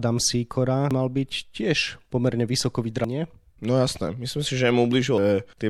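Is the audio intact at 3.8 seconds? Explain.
Yes, the speech at 3.8 seconds plays through intact, with no dropout, click, distortion or other fault at that moment.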